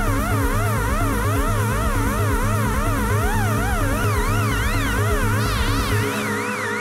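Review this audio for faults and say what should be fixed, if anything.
A small jump forward in the sound occurs at 0.34, 2.74, 4.04 and 5.62 s. About 10 ms is skipped at most of these points and about 30 ms at 2.74 s. The likely cause is a dropped buffer (overrun): samples were overwritten before being read, so the surrounding audio is joined directly. On a waveform this shows as an abrupt step, and on a spectrogram as a thin broadband vertical line. Prevent it with larger capture buffers or a higher-priority audio thread.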